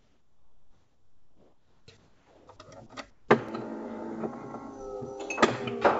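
From 0.0 to 1.88 s, 1.97 to 2.47 s, and 3.10 to 3.28 s, the sender most likely stopped transmitting while the sound dropped to a quiet background, about 35 dB below the loudest parts (about 32 dB in the second stretch). The receiver filled each gap with comfort noise in place of the background, a smooth, characterless hiss about 6 dB quieter than the real ambience (about 5 dB in the third stretch). The natural texture disappears and returns each time the sound resumes.

At 3.49 s a dropped buffer (overrun) was likely the cause: the capture side fell behind, and a few milliseconds of samples were overwritten before they were read. The audio on either side is spliced together with no gap, so the sound skips forward abruptly. Within the G.722 call path, which carries nothing above 8 kHz, the skip is brief.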